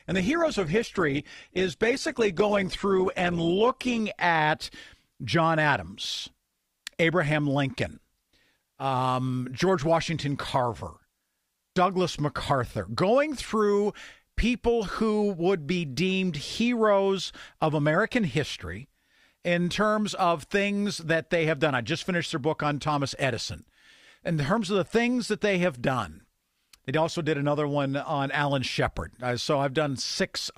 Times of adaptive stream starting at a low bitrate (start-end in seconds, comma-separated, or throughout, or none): 0.00-4.00